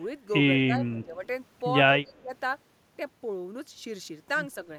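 From 0.66 to 1.23 s, the speech sinks by roughly 10 dB. It comes back afterwards. From 2.0 to 2.32 s it drops again, more deeply, by around 20 dB. The pattern likely points to speech suppressed in double talk. The echo canceller probably heard the far side talking at the same time. It could not tell this talker from the returning echo, so it turned both down.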